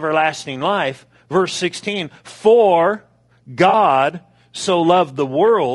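From start to finish the speech has a rough, grainy texture, with noise filling the gaps between harmonics and a thin, synthetic-sounding top band. This is plainly audible codec damage, likely from low-delay AAC compression (AAC-ELD) at a rate that fits roughly 32 kbps, where short frames resolve pitch poorly.

At 3.69 to 3.74 s, AAC frame loss with concealment produces a brief smeared, noisy patch. About 40 ms of audio, consistent with two lost frames, was rebuilt by the decoder from the last good spectrum, so the detail is replaced by a blurred approximation.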